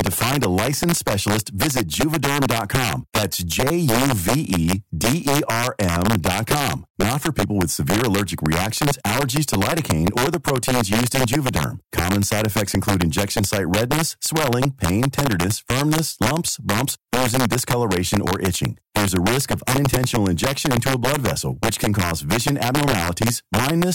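All through the speech there's integer overflow: loud peaks pushed about 2 dB past full scale wrap to the opposite sign, giving sharp, violent cracks on a small fraction of samples.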